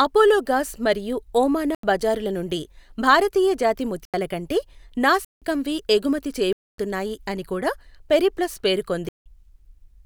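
Speech with five abrupt holes of digital silence, the corrupt frame muted fault: 1.75–1.83 s after "అపోలోగాస్ మరియు ఓమానా", 3.86–4.14 s after "బజారుల నుండి భారతీయ జాతి", 5.25–5.41 s, 6.53–6.78 s, and 9.09–9.26 s after "అని కూడా పెరిప్లస్". Each gap's length fits whole rejected compressed frames, two to five per hole. Unlike concealment, which fills gaps with smeared sound, or a dropout that shifts timing, these holes are pure silence and the speech resumes on schedule.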